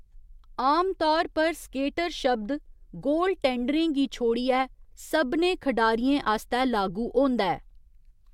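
No technical faults can be heard anywhere in this speech recording.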